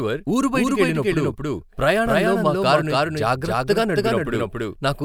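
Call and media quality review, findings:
Doubled audio track, throughout the clip. Speech heard twice: a second full-band copy trails the first by roughly 300 ms, at about the same level. Copy is dry, with no decay or room colour, so it reads as a clean repeat rather than an echo. Likely cause: a slower second capture path mixed back in, or an edit holding two copies out of step.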